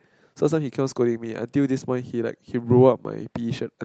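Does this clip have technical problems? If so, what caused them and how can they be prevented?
No, this speech clip has no technical faults to fix. It has passed through a WebRTC call path that is working normally, with the audio band ending around 8 kHz and the light coding texture of an Opus call at a moderate bitrate.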